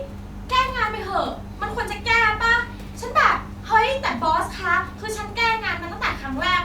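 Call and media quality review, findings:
No faults found in the speech signal; the room's background noise sits about 26 dB below the speech and belongs to the recording environment, not the transmission path.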